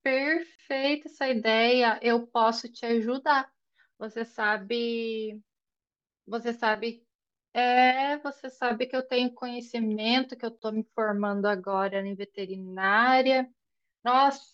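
A gap at a join of encoded pieces opens at 0.55 to 0.59 s and again at 10.59 to 10.62 s, silences of about 34 ms and 32 ms spaced 10 s apart. The speech appears to have been encoded in separate pieces and joined untrimmed, so each piece's leading encoder delay and padded final frame remain. Each gap cuts in and out, its edges smeared by the codec, before the speech resumes where it stopped.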